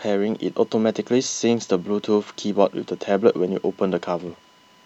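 Running under the speech for its whole length is USB whine, a steady 1 kHz tone sitting faint, roughly 40 dB below the signal. Current drawn in the bus's 1 ms frames leaks through power or ground, and unlike low mains hum this pitch is high and thin.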